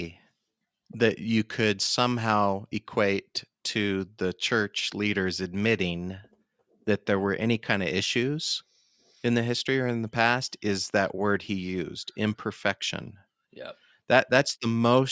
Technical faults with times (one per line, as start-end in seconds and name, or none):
none